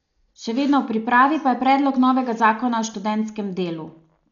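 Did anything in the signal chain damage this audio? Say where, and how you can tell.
Yes, the codec: the speech sounds dull throughout, with nothing above 7 kHz and rough, fluttery fill noise, likely heavy Dolby Digital compression at a starved bitrate near 48 kbps.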